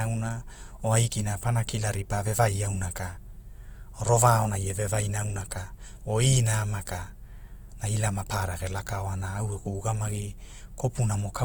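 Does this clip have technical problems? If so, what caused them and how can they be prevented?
Yes. Throughout, the speech sounds grainy and rough, with noisy fill in the upper bands up to about 20.2 kHz. This is likely Opus compression in music mode at a low bitrate near 24 kbps. Encode at a higher bitrate to prevent it.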